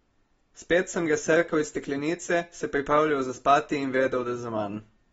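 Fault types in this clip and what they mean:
AAC compression: dull, smeared speech, likely from AAC-LC coding at a low bitrate near 24 kbps; a spectrogram shows a hard ceiling with nothing above 7.6 kHz.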